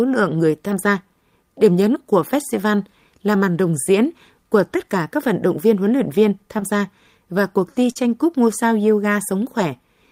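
A speech recording with two spots of short concealed packet loss, at 6.59–6.63 s and 7.91–7.97 s. About 20 ms and then 40 ms of audio arrived too late, so the decoder bridged each gap by extending the preceding sound. You hear that as a quick smear or wobble before it blends back in.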